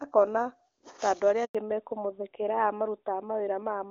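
At 1.45 s a handover gap cuts the speech for 100 ms as the call switches networks, showing as a flat silent stretch in the waveform with no energy on the spectrogram. From 1.55 s to the end, fallback to narrowband strips everything above 4 kHz; the spectrogram's upper band goes empty and the voice turns duller, consistent with a drop from HD Voice to a narrowband codec.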